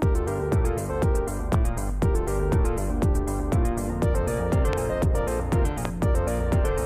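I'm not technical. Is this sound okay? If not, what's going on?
No, there are three loud pops, at about 1.54 to 1.56 s, 4.73 to 4.75 s and 5.85 to 5.87 s. Each is a single sharp crack, much louder than the sound around it, and over in about two hundredths of a second while the audio keeps going underneath. A pop like this is likely a brief electrical jolt, such as a plug, a switch or a bit of static, that got mixed into the signal.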